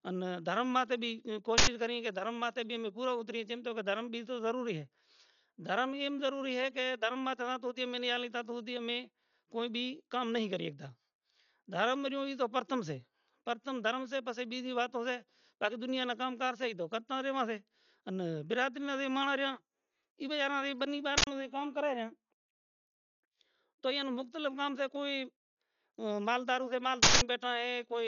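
Speech with a dull, band-limited sound and nothing above 7 kHz throughout, plus heavy codec damage: a rough, fluttering noise that hangs around tonal parts of the sound. This is likely Dolby Digital compression at a starved bitrate, with the character pointing to about 48 kbps, where the encoder narrows the band and replaces unfunded spectral lines with dither noise. Three loud bursts of digital noise come from an uninitialised buffer, where leftover memory was played as samples. The first runs from 1.58 to 1.67 s, between "ان دھرم ماٹے بھی" and "کریئے کہ دھرم", and the second from 21.18 to 21.27 s, after "ایبے اینا نی بننی". Each lasts about 93 ms, which fits a 4096-sample buffer. The third, from 27.03 to 27.21 s after "ھے کوئی مال", lasts about 186 ms, which fits an 8192-sample buffer.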